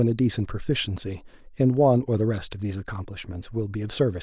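No technical faults can be heard anywhere in the speech.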